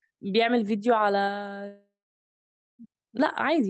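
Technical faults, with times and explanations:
1.67–2.82 s, long network dropout: sound decays into a fading buzz, then 0.91 s of silence, likely a stalled stream. Unlike a brief glitch, the lost audio never returns.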